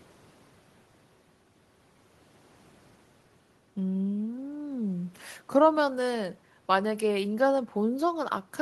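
Nothing technically wrong turns up anywhere in this speech clip, so there's no problem here to point to.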